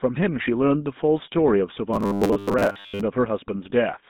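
Across the whole speech clip the GSM full-rate codec is plainly audible. The sound is confined to roughly 150 Hz to 3.7 kHz, and the voice has the gravelly, buzzy grain of a vocal-tract model driven by sparse pulses, which fits the 13 kbps full-rate coder. Unlike plain band-limiting, the roughness sits inside the voice itself rather than just dulling it, and it stays constant instead of coming and going.

From 1.94 to 3.04 s the voice turns rigid and metallic, locked to a steady 100 Hz buzz that only loosely follows the speech. This is likely robotic sound from repeated short buffers. Audio arrived too seldom, and the gaps were filled by looping the most recent slice, which fits a 10 ms buffer. Most of the real audio in that stretch is skipped. The fixed pitch is what separates it from codec roughness, which follows the voice's own pitch.

At 3.70 to 3.73 s there is a brief lost GSM frame. 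The decoder held the last good settings for about 20 ms, which fits a single dropped frame. It is heard as a momentary rough ring, with no gap of silence. Because it is so short, it never reaches the fade-out a longer loss would bring. Unlike the buffer looping earlier, it has no steady imposed pitch and passes almost instantly.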